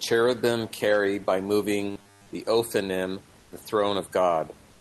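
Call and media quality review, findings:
Robotic sound from repeated short buffers, 1.91–2.31 s, just after "carry by." Likely jitter-buffer underrun: packets arrived too seldom, so playout looped the last chunk of roughly 10 ms while real audio was dropped. Most of the span is repeated material. Symptom: rigid metallic buzz at 100 Hz, tracking the speech contour only loosely.

Comfort noise in place of the background, 3.39–3.51 s (120 ms) and 4.71–4.81 s (97 ms). Likely Opus DTX: the sender's VAD flagged no speech and stopped sending audio, and the receiver synthesised noise instead. Symptom: the real room background is replaced by flat, featureless noise about 3 dB quieter.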